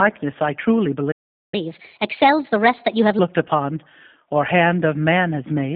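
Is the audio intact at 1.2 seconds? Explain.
No. At 1.2 s you're right in the middle of a playback stall. The sound cuts out mid-flow just after "I truly" at about 1.11 s and stays silent until about 1.54 s, a gap of roughly 0.41 s, before carrying on. It isn't a dropout in the recording itself. It sounds like the player was starved of data or its thread got held up, which is likely what's going on here, and output simply froze until it caught up.

Underneath that, the whole stretch runs through the G.729 codec at 8 kbit/s, so even the sound on either side of the gap is band-limited to roughly 150 Hz to 3.5 kHz, with nothing at all above 3.5 kHz. The codec rebuilds the voice from a vocal-tract filter, a pitch predictor and a handful of pulses per frame rather than keeping the waveform, and that damage is plainly audible as a rough, slightly synthetic phone-line quality.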